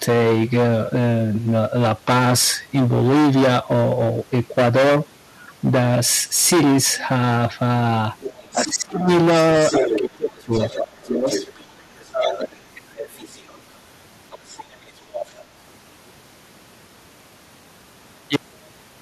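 Throughout the recording, the speech is driven about 20 dB past what one stage in the chain can pass, so a large share of the waveform has its peaks sliced flat. This is hard clipping. The flattened tops add harmonics high up the spectrum, and with this much overload every stressed syllable carries a harsh, fuzzy grit rather than occasional crackle.

From 6.99 to 7.06 s, the other side's voice leaking through appears as a faint scrap far below the talker. The likely cause is that the far end plays on a loudspeaker and the echo canceller fails to clear it from the microphone. It returns louder from 8.2 to 8.73 s, only somewhat below the speech.

Overlapping that, from 8.53 to 9.07 s, comes speech suppressed in double talk. With both sides active, the canceller likely cannot separate its own talker from the echo and turns everything down. The near voice sinks steeply, by something like 25 dB at worst.

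The longest leak runs from 9.38 to 13.59 s, with the second voice nearly as loud as the talker. During it, the near speech is pushed down again from 9.79 to 11.31 s, dipping deeply for around a second. A milder, shorter dip follows from 12.15 to 12.55 s.

A final stretch of leakage, well under the speech level, comes through from 14.31 to 15.34 s.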